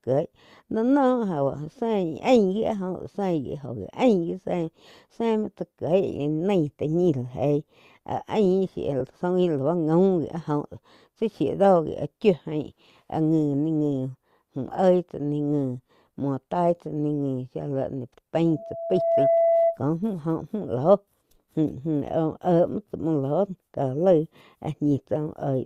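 At 9.00 to 9.02 s and again at 14.77 s the speech has brief holes the length of a single 10 ms frame, consistent with lost LE Audio frames. The LC3 decoder bridged each gap by replaying the previous spectrum with scrambled signs, so instead of a clean dropout or a click there is a tiny grainy smear. Because each gap is so short, the concealment never reaches its fade-out, which sets it apart from a true silence gap.

From 18.47 to 19.79 s a loudspeaker feedback squeal appears: a single steady tone at 667 Hz swells over roughly 0.7 s until it sits around 5 dB above the speech, then stops. A microphone was picking up its own loudspeaker, and the loop gain at that one frequency exceeded unity. Unlike an added interference tone, it grows by itself rather than starting at full level. The light, breathy grain in the speech is likely the LC3 link running at 64 kbps with 10 ms frames.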